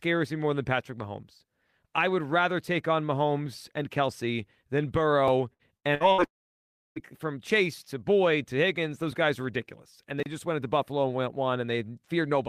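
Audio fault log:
5.53 to 6.21 s, repeated packet loss (robotic sound): four gaps of up to 59 ms each, about a third of this span, were filled by stretching the last sound forward, so the speech turns choppy with pieces missing.
6.24 to 6.99 s, long network dropout: about 0.72 s of speech is gone. A brief continuation of the previous sound gives way to roughly 0.67 s of silence before the audio resumes, which points to a likely network dropout where nothing arrived.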